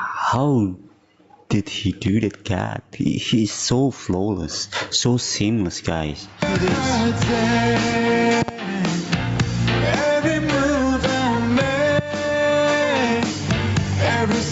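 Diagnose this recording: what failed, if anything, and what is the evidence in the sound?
Gain pumping runs through the whole clip, with a swing of about 15 dB, so everything sounds squashed. This is likely an input gain set far too high, with a fast limiter in the analogue or driver stage clamping it.

There are loud pops at two points. The first is a double pop between 8.42 and 8.51 s, and the second is a single pop between 11.99 and 12.01 s. Both peak about 20 dB above the sound, which carries on underneath. They likely come from a voltage step in the analogue wiring, such as a plug, switch or static discharge.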